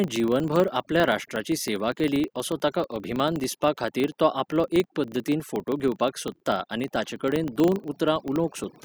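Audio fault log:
Throughout, overdone noise removal: bands near the noise floor are pulled down hard, so the background drops and breaks up into twinkling specks, unlike plain hiss.
Throughout, filter restarted on every block: each block begins from a cleared state with a small transient, giving a 25 Hz buzz that rises and falls with the speech level, not a steady hum.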